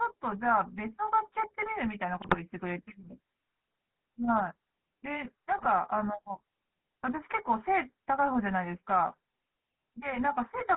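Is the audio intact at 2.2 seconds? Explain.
No, not quite. Right at that point, from 2.22 to 2.35 s, you get GSM bit errors. Flipped bits are landing in the decoder's filter, pitch and gain parameters, so for a few frames the spectrum gets bent out of shape and the level jumps. It comes across as a short squawky, gargling burst. The length fits roughly five corrupted 20 ms frames, consistent with a badly degraded link at a few percent bit error rate.

Underneath that, the whole clip carries the GSM full-rate codec's sound, and it's plainly audible at 2.2 s too. The codec rebuilds speech from a vocal-tract model excited by regularly spaced pulses, which gives the voice that buzzy, gravelly edge. The band is squeezed to about 150 Hz to 3.4 kHz, so the top end is gone. All of it is what you'd expect from a 13 kbps full-rate stream.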